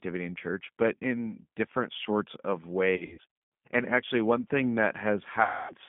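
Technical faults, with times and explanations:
Throughout: G.729 codec. The speech is squeezed into a phone band of roughly 150 Hz to 3.5 kHz at 8 kbit/s. Each frame is rebuilt from a vocal-tract filter, a pitch predictor and a few pulses, so the codec damage is plainly audible as a rough, synthetic edge.
2.96–3.21 s and 5.43–5.74 s: VoIP packet loss concealed by the speech codec. The first starts just after "in different sorts of", with about 320 ms of audio lost in short gaps spread over 560 ms. The longest gap is 80 ms. The second loses about 260 ms, and the losses fit 20 ms packets. In each gap the decoder extends its last pitch and filter at falling gain, so the sound stretches into a fading buzzy tone or coloured noise. Because every frame builds on the previous one, the speech stays weak or distorted for a short while after the packets return.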